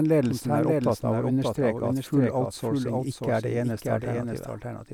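From the start of the speech to the end, a doubled audio track runs under the original: a second, full-band copy trails by roughly half a second and sits around 5 dB quieter, with no decay or room colouring. The likely cause is the same signal reaching the mix twice, once through a slower path. On a waveform, every syllable envelope reappears, smaller, about half a second later; a spectrogram shows each pattern duplicated and shifted right.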